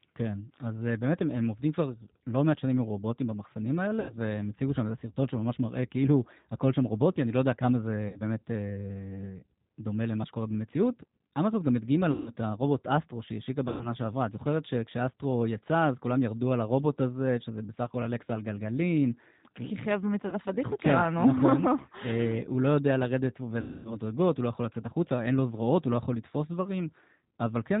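From start to end, the speech passes through the G.729 codec. Nothing above 4 kHz survives. The voice sounds thin, slightly rough and synthetic, and the damage is plainly audible. This fits an 8 kbit/s G.729A link.

VoIP packet loss concealed by the speech codec strikes six times. The gaps are at 4.00 to 4.17 s (90 ms lost), 8.08 to 8.20 s (60 ms), 12.11 to 12.31 s (150 ms), 13.68 to 13.88 s (120 ms), 20.29 to 20.37 s (30 ms) and 23.61 to 23.97 s (240 ms). The decoder repeats its last pitch and filter as a fading buzzy tone or coloured noise. The voice stays weak or distorted for tens of milliseconds or more afterwards. The longest gap points to about eight lost packets.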